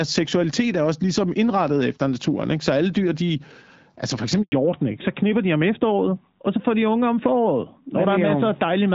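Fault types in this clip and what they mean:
Handover gap: At 4.42 s the speech dies away within a few tens of milliseconds and stays silent for 100 ms, until 4.52 s. The call was moving between networks, and no speech frames arrived during the switch, so that stretch is lost.
Fallback to narrowband: From 4.52 s to the end the speech turns duller and rougher, with nothing above 4 kHz. After the handover the call dropped from HD Voice to an older narrowband codec, which fits AMR-NB at 12.2 kbit/s.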